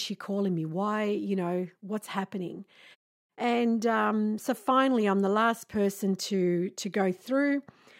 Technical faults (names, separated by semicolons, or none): none